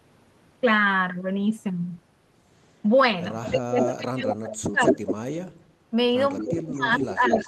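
At 3.44 s there's a brief echo leak, a delayed copy of the speech about 215 ms behind. It's most likely a far-end speakerphone whose echo canceller let some of its mic pickup back through. It comes back at 3.77, from 4.82 to 5.14 (nearly as loud as the speech), at 6.32 to 6.59 and from 6.95 to the end, with the lag creeping out to about 225 ms. From 3.5 to 5.23 s the speech keeps dipping, by as much as about 25 dB over roughly a second and a half. That's speech suppressed in double talk, probably the canceller ducking the near talker while it fights the overlapping echo. It happens again from 6.44 s to the end, with drops of about 15 dB over around half a second.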